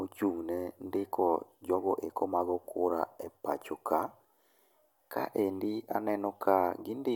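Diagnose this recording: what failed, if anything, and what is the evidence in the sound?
Nothing failed at any stage of the chain: the speech recording carries no audible fault from capture through to playback.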